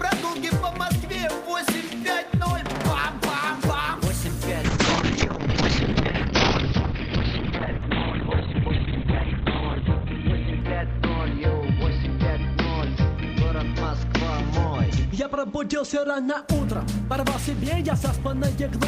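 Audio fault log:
4.65–16.47 s, call bitrate drop: the sound shifts from full and bright to muffled and rough, with the top end cut off above 4 kHz where it had reached 20 kHz. The call's bandwidth estimate fell, so the encoder was told to spend far fewer bits and coded everything more coarsely, which fits a fall from around 40 kbps to 9 kbps. The roughest stretch lasts about 4.9 s, and the sound stays degraded until the bitrate recovers near 16.47 s.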